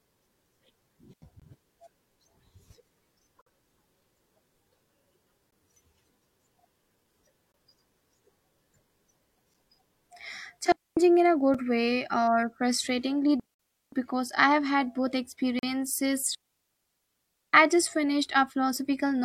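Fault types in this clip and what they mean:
digital wireless dropout: The receiver lost too much of the link's data and muted the output, leaving clean near-silent holes with no noise burst on either side. Here there are four: at 1.13 s lasting about 87 ms, at 10.72 s for about 0.25 s just before "in a", at 13.40 s for about 0.48 s between "way or frustratingly" and "I have had both", and at 16.35 s for about 1.19 s, the longest.
gap between stream segments: Successive stream segments have timestamps that do not meet, so the player pads each join with silence. Nothing is lost, but the sound stops with hard edges for a moment. The holes recur about every 2 s, which fits 2-second segments, at 1.40, 3.41, 5.51, 7.52, 9.54, 11.54 (between "in a" and "way or frustratingly"), 13.54 and 15.59 s. They last from 4 ms to 51 ms. The one at 13.54 s falls inside a dropout.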